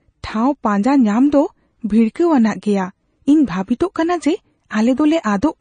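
From start to finish the speech has a hard ceiling at about 9.4 kHz and a watery, swirly texture, likely from heavy MP3 compression. That fits a starved bitrate around 32 kbps, where weak frequency lines flicker between frames, s sounds chirp and attacks smear.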